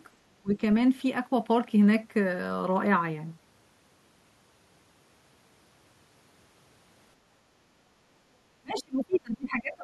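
From 0.25 to 0.61 s, the speech sinks sharply, by roughly 30 dB at its deepest. This is speech suppressed in double talk. The likely cause is an echo canceller that heard both sides at once and turned everything down.

The same suppression returns at 8.6 s and lasts to the end, about a second in all. The speech dips again, likely for the same reason.

Inside that stretch, the other side's voice leaks through, at 8.76 to 8.82 s and 9.12 to 9.2 s. These are brief scraps, around 20 dB below the speech. The likely cause is loudspeaker echo the canceller failed to remove.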